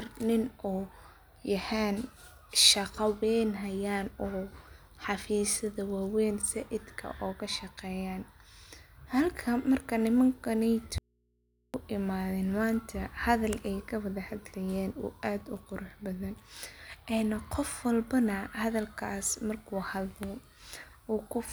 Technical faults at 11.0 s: audio dropout to a faint residue

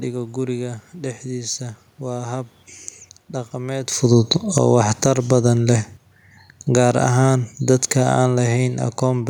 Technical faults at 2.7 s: none

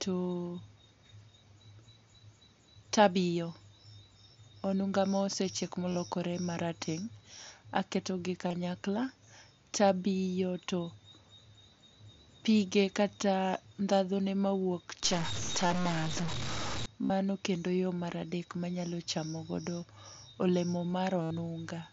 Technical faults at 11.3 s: none

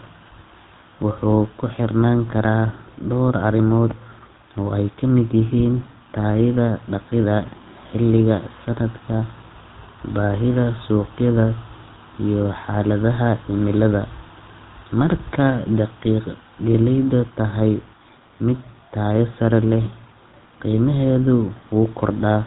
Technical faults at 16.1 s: GSM full-rate codec

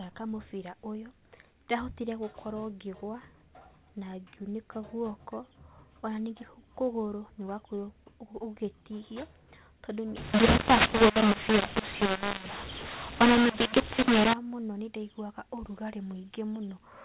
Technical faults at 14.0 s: mu-law and A-law mixed up

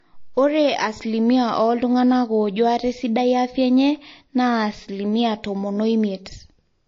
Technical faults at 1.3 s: MP3 compression

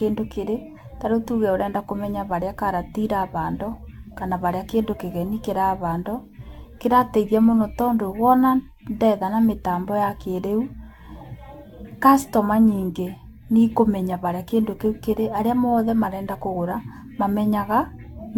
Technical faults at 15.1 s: generation loss

